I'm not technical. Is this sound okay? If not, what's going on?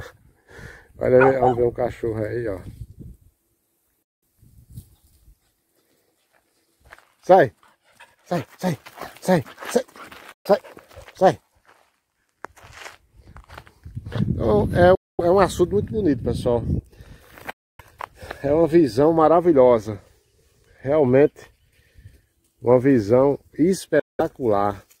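No. The sound cuts to silence five times, at about 4.03, 10.32, 14.95, 17.51 and 23.99 seconds, each gap lasting roughly 0.1 to 0.3 seconds. This is likely a Bluetooth dropout: audio arrived late, was discarded, and playback resumed further along.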